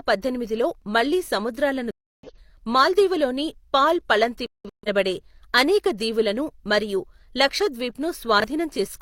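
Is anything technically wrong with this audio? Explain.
Yes, this speech clip has two kinds of fault.

At 1.24–1.28 s, just after "పద్దెనిమిదిలో మళ్లీ", and again at 8.40–8.44 s, there is a brief jumbled stutter. These are chunks out of order: one 20 ms chunk landed a chunk late, so the audio is swapped across hard joins.

At 1.91–2.30 s, between "పద్దెనిమిదిలో మళ్లీ సముద్రాలను" and "మాల్దీవులలోని పాల్", and at 4.46–4.88 s, after "మాల్దీవులలోని పాల్", the sound drops abruptly into silence. This is a corrupt frame muted: the decoder rejected damaged compressed frames and silence replaced them, leaving timing intact.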